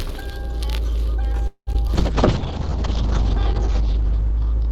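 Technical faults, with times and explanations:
1.47–1.69 s, call audio freeze: Packets were most likely held up in transit, so the jitter buffer ran dry. The receiver stretched the last sound for about 195 ms, including roughly 80 ms of silence. Nothing was lost when the audio resumed, but it now runs about 195 ms later.
1.73–1.76 s and 1.88–1.91 s, short concealed packet loss: Two brief chunks of the stream, 20 ms and then 40 ms, never reached the decoder in time. Each hole was patched by extending the preceding sound for 11 ms and 8 ms respectively. The result is a quick smear or wobble, and the second one also trims the delay a little.
1.96 s to the end, call bitrate drop: The bandwidth estimate fell and the encoder went from 64 kbps down to 6 kbps, staying at that floor for about 1.46 s. The coded bandwidth shrank from 20 kHz to 8 kHz, so the sound turns muffled and rough, with a watery coding texture.
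2.69–4.30 s, jitter buffer slow-down: With its reserve low, the receiver repeated tiny slices of the signal to add 51 ms of audio. Playback runs at about 97% speed with the pitch unchanged, so sounds are slightly drawn out and may warble faintly.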